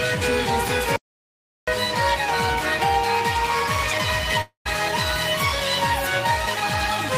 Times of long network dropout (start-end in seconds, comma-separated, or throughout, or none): 4.41-4.67